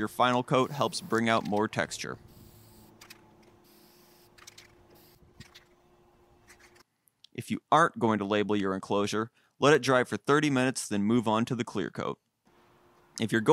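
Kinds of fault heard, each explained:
CD scratch ticks: A surface blemish on the disc wipes out more data than the player's error correction can rebuild, and the damage recurs with each revolution. Here three brief ticks fall between 9.75 and 10.13 s, spaced about a fifth of a second apart, each lasting well under a millisecond where the player patched or muted the lost samples. On a waveform they are tiny notches or spikes; a spectrogram shows thin full-height vertical lines at even spacing.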